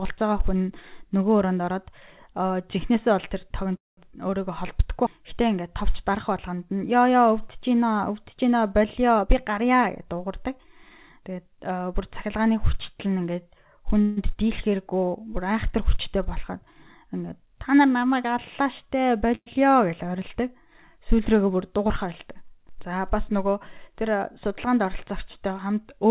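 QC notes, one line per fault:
3.76 to 3.99 s, 14.01 to 14.32 s and 19.35 to 19.48 s, call audio freeze: at each point the sound stalls and is padded for about 212 ms, 154 ms and 111 ms respectively, then resumes exactly where it left off, so nothing is lost but the timeline is pushed later each time. The likely cause is delayed packets draining the jitter buffer. The padding is a decaying buzz or hiss carried over from the last sound, fading into roughly 180 ms of silence at the first stall and about 40 ms at the third, while the second never goes silent. On a waveform, each shows as a fading tail, a flat stretch where silence occurs, then a clean restart. On a spectrogram, each shows as smeared, repeated harmonic bands fading out.
9.18 to 11.61 s, jitter buffer speed-up: the speech runs about 9% fast at unchanged pitch, sounding hurried, because a backlog built up in the jitter buffer and the receiver trimmed it by cutting out tiny pitch-period slices again and again, roughly 200 ms in total. 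A spectrogram shows harmonics at normal spacing but syllables compressed in time, and a waveform shows shortened voiced stretches with no visible gaps. The call path's G.711 A-law coding at 64 kbps leaves nothing above 4 kHz across all of it.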